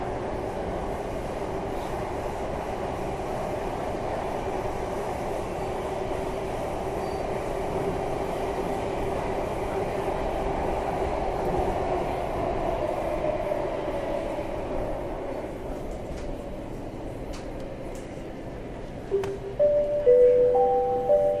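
No technical faults are audible.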